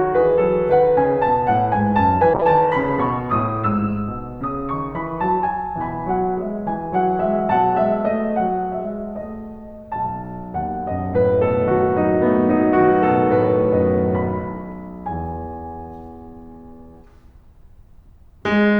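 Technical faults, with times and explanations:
2.35–4.09 s, call bitrate drop: the music suddenly turns dull and muffled, with the top end gone and a rough, watery texture, and it stays that way for about 1.7 s before the brightness returns. The call's bandwidth estimate fell, so the encoder was given far fewer bits, consistent with a fall from about 64 kbps to around 14 kbps. Opus then coded the music coarsely and cut off the high frequencies until the rate recovered.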